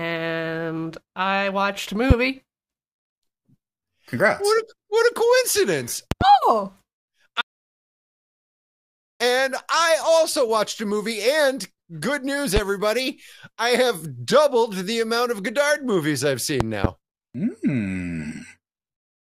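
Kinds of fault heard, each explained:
Loud pop: Six sudden pulses land on top of the speech, each about 20 dB above it, while the speech carries on underneath. Single pops sit at 2.11 to 2.13 s, just after "I watched a", and at 12.57 to 12.59 s, right after "good news". Double pops, two in quick succession, come at 6.12 to 6.24 s and 16.60 to 16.87 s. A likely cause is a voltage step from a plug, switch, static or driver glitch.
Audio dropout to silence: The speech cuts out at 7.41 s and returns at 9.20 s, just before "I also watched a". For those 1.78 s there is pure silence with no room tone underneath, and whatever was said in that span is gone. The likely cause is lost input, such as a disconnected device, a failed link or a stray mute, while the recorder kept writing silence.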